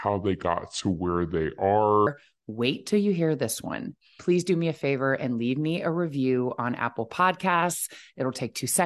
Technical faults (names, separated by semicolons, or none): wrong sample rate